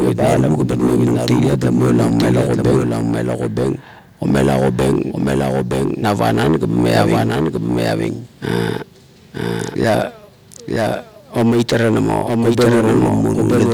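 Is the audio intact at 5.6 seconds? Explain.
No. Throughout the clip, including 5.6 s, a doubled audio track is present, likely from the speech being captured a second time through a slower path. A dry, full-band copy trails about a second behind, roughly 5 dB quieter, with no decay.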